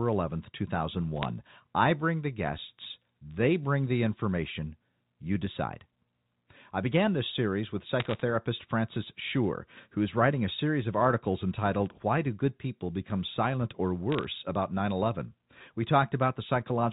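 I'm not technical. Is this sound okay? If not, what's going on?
No. There are bit errors on a digital phone line. You can hear short bursts of sharp ticks and crackle over the speech at about 1.23 to 1.25 seconds, 8.0 to 8.21 seconds and 14.12 to 14.25 seconds. The call travels as a stream of numbers, and a few of those numbers got scrambled on the way. Each scrambled number puts one wrong point in the sound, and when the scramble hits a big part of the number, that is heard as a click.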